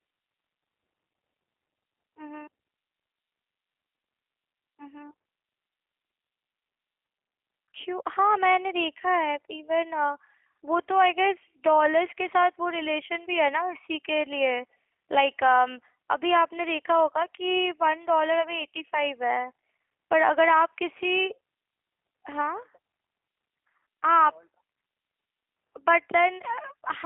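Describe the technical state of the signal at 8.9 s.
At 8.9 s the speech carries G.729 codec coding, as it does for the whole clip. The signal is confined to a telephone line band of roughly 300 Hz to 3.4 kHz, and the voice has the plainly audible rough, synthetic quality of a model-based coder. This comes from rebuilding each 10 ms frame from a vocal-tract filter, a pitch predictor and a few pulses, consistent with G.729A at 8 kbit/s.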